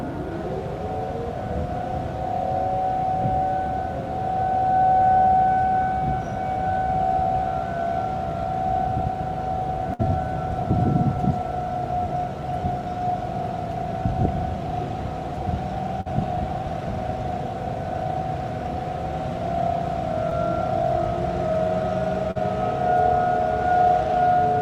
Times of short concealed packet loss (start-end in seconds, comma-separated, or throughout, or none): 20.29-20.33, 22.31-22.37